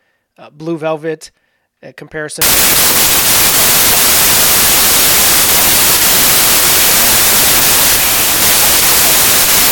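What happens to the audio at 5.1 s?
Packed 24-bit samples are read as 32-bit from 2.42 s onward, a wrong sample width: loud noise buries the speech, which runs 1.33 times fast and higher-pitched.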